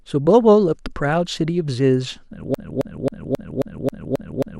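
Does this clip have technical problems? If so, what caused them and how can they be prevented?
Yes. From 2.54 s to the end, a 0.27 s fragment of speech repeats exactly eight times, a broken-record loop from a likely stalled player or stream. Unlike an echo, each identical repeat stays at full level. Prevent it with buffer-underrun handling that inserts silence rather than replaying the last fragment.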